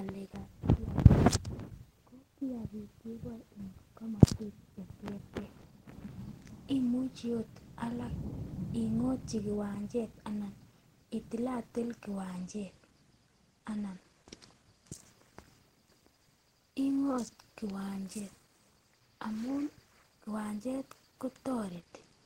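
At 9.74 to 9.76 s there is a short concealed packet loss: about 10 ms of the speech never reached the decoder in time. The receiver extended the preceding sound to cover the gap and blended back into the incoming audio, leaving a brief smear or wobble.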